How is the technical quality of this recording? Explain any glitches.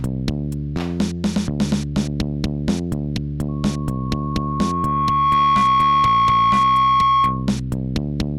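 The recording is marred by loudspeaker feedback squeal from 3.48 s to 7.53 s. A microphone was picking up the loudspeaker it was feeding, and at 1.1 kHz the loop gain rose above one, so that frequency kept reinforcing itself on every trip around. It appears as a pure tone that swells over roughly two seconds into a steady squeal, ending up around 5 dB louder than the rest of the sound until it stops at 7.53 s.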